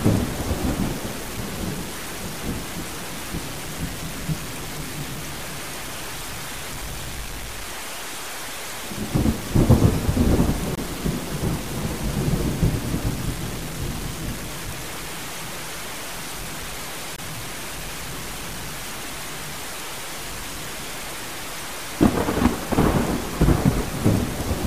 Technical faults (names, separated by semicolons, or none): stuck bit; Bluetooth dropout